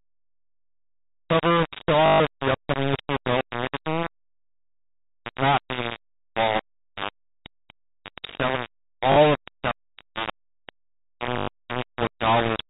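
Low bit depth without dither runs through the whole clip. The speech, already confined below 4 kHz by its telephone channel, carries a coarse grainy distortion nearly as loud as the voice itself. It is likely rounding to only about 3 bits, so the error tracks the waveform and quiet stretches sputter.

Packet loss with last packet repeated occurs at 2.06–2.2 s, after "the cover" and before "of the upcoming issue"; at 9.12–9.16 s, just before "of the"; and at 11.38–11.48 s, after "stock for which we". Each gap (140, 40 and 100 ms) is filled by replaying the last received chunk. This fits 20 ms packets, giving a robotic buzz near 50 Hz.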